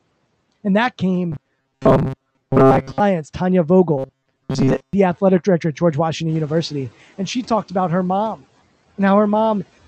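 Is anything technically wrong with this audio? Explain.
Yes, two kinds of fault. From 1.32 to 3.00 s, and again from 3.98 to 4.93 s just before "athletic director at", there's robotic sound from repeated short buffers. It's likely from audio arriving too slowly, so a tiny slice, about 7.5 ms, got looped over most of that stretch. That fixes a 133 Hz metallic buzz on the speech.

From 6.28 to 6.64 s the noise suppressor is catching up. When the room noise jumps around 6.5 s, it takes 360 ms for its estimate to adapt. The louder noise leaks through at first, then drops by about 7 dB.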